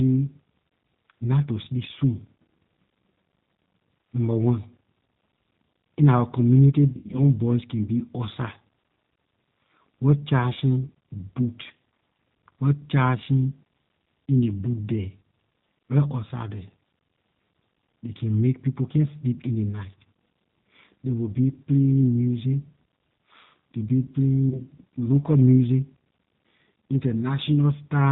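G.729 codec damage runs through the whole speech clip. At 8 kbit/s the decoder rebuilds each 10 ms frame from a vocal tract filter, a pitch predictor and a few pulses, so nothing above 4 kHz survives and the voice sounds plainly rough and synthetic.

VoIP packet loss concealed by the speech codec occurs from 6.93 to 7.20 s, just after "in our community". About 140 ms went missing, scattered over 200 ms with the longest gap 80 ms, which fits roughly seven lost 20 ms packets. The decoder stretched its last pitch and filter into a fading buzzy tone or coloured noise, and the voice stays weak briefly afterwards. A shorter repeat at 24.50 to 24.62 s, just before "local music", points to a single lost 20 ms packet.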